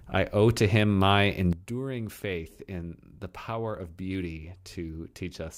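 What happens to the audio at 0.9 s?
At 0.9 s the speech runs through cleanly, with no dropout, click, distortion or other fault at that moment.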